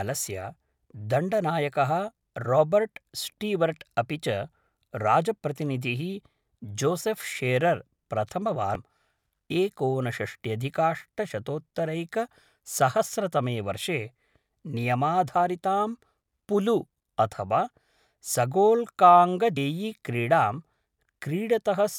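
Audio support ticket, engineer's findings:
Damaged data in a compressed stream. Brief glitch at 8.75 s, then a longer glitch from 19.54 to 19.57 s, in speech. Likely source is corrupt bytes in the encoded file. The decoder misreads those frames, loses sync, and hunts for the next valid header.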